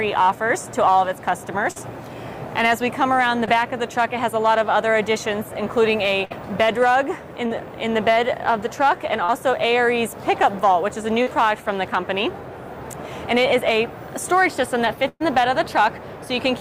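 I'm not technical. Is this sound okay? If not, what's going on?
No. The audio drops out in small pieces, as happens when a call connection loses bits of data. At 1.71, 3.46, 7.46, 9.24 and 11.22 seconds there is short concealed packet loss. The receiver covers each tiny gap by stretching the sound just before it, so you hear only a quick smear or wobble of a few hundredths of a second.

At 6.25 and again from 15.08 to 15.22 seconds there is a burst of packet loss. These gaps are longer. The patched-in sound turns into a held buzz or a fading hiss, and the second one ends in a brief silence. Then the sound jumps ahead, and a short stretch of the original is missing entirely.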